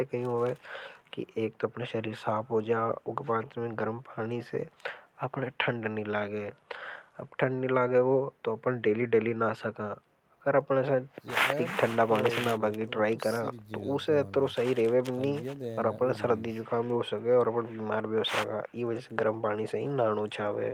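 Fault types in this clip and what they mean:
No faults detected.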